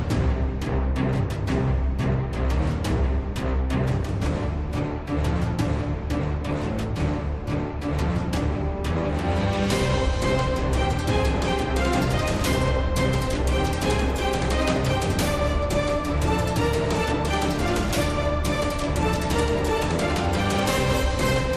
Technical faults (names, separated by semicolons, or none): channel delay (comb filtering)